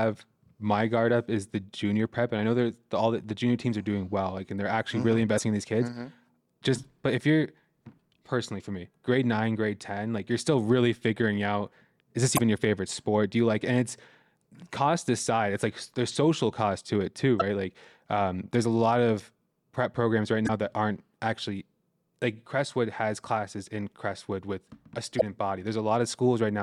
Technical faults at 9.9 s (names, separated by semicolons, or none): none